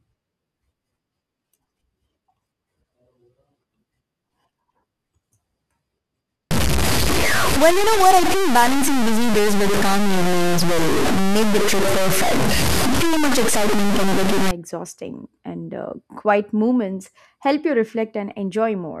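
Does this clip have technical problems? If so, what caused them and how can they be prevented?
Yes. From 6.51 to 14.51 s the speech turns harsh and grainy, with the noise about as loud as the speech. That's likely low bit depth without dither: truncation to about 3 bits. To prevent it, keep 16 bits or more and dither whenever reducing word length.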